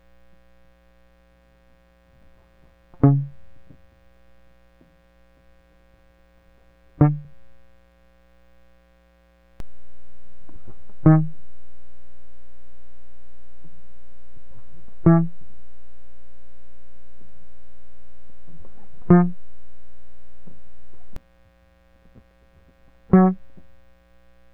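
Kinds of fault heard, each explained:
Overlapping chunks: Each 5-second block restarts about 21 ms early, so a sliver of the music repeats as a regular stutter, unlike a dropout, where audio goes missing.
DC step: The waveform's zero line jumps at 9.6 s and the offset lasts until 21.16 s, giving a low thump without any repetition, while the music continues unchanged.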